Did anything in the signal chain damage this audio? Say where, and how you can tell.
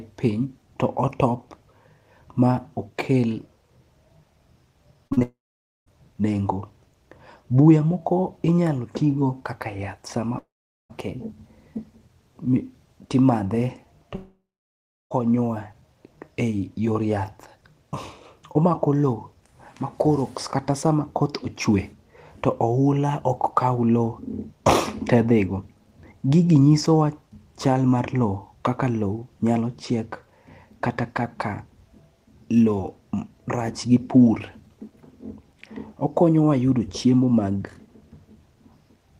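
Yes, at the network stage. Short concealed packet loss at 5.07–5.13, 5.13–5.19 and 5.19–5.23 s: 40, 40 and 20 ms gaps are bridged by extending the preceding sound, producing a brief smeared wobble.

At 5.23–5.88, 10.38–10.91 and 14.15–15.12 s, the sound continues as a fading buzz or hiss, drops to silence for 0.4–0.7 s, then resumes with material missing, likely a long network dropout.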